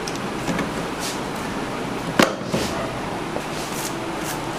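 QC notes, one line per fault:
0.48–0.50 s, loud pop: A brief voltage pulse, likely from a plug, switch, static discharge or driver glitch, enters the signal path and is shaped by the following circuits into a single sharp pop, peaking about 10 dB above the sound, which carries on underneath.
3.36–3.60 s, loud pop: A similar disturbance produces two pops in quick succession over about a quarter of a second, peaking about 15 dB above the sound.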